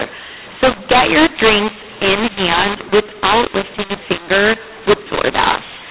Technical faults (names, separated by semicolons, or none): mu-law and A-law mixed up